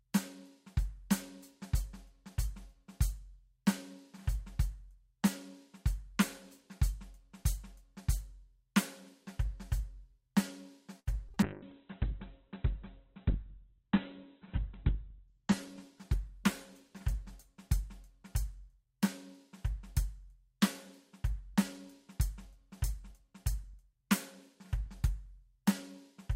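A music recording carries four kinds of call-transport fault. At 10.99 s a packet arrived late and the jitter buffer ran dry, causing a short stall from a late packet. The receiver stretched the last sound for about 74 ms until the packet turned up, then carried on from the same point, so nothing is lost. The music hangs for an instant with a faint buzzy sustain, and everything after it sits about 74 ms later. Short concealed packet loss follows at 11.29 s and again at 11.34 s, each time with roughly 20 ms of audio that never reached the decoder. The receiver papered over the gaps by extending the preceding sound, for 13 ms in the first case and 21 ms in the second, before blending back in. The result is a quick pair of brief smears or wobbles in the music. From 11.43 s to 18.86 s comes a call bitrate drop. The link's bandwidth estimate collapsed and the encoder was forced down to a tiny bit budget, which fits a fall from around 128 kbps to about 8 kbps. 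The bottom rate holds for about 3.6 s. The high end is cut off at 4 kHz instead of extending to 20 kHz, so the music turns muffled, coarse and watery until quality climbs back. Between 22.24 s and 24.09 s a jitter buffer speed-up occurs. The receiver held more audio than it wanted and trimmed it by repeatedly removing short pitch-period slices, about 40 ms in all. Playback runs about 2% fast at unchanged pitch, and the beat loses its steadiness.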